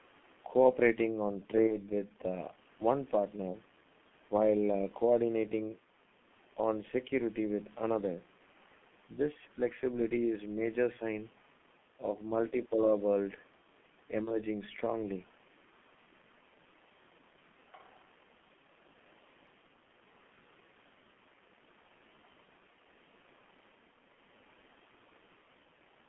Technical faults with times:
0.00-26.09 G.723.1 codec
1.67-1.75 VoIP packet loss concealed by the speech codec
14.25-14.31 VoIP packet loss concealed by the speech codec

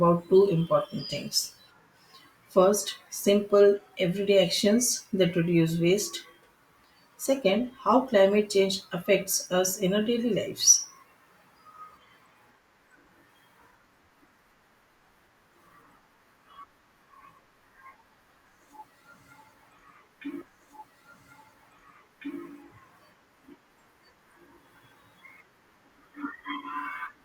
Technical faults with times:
20.41-22.41 stream segment repeated

